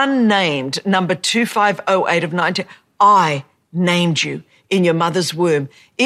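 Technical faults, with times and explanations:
2.40–2.42 s corrupt frame decoded: one damaged frame played anyway, giving a loud glitch of misplaced energy peaking around -5 dBFS just before "I named you in".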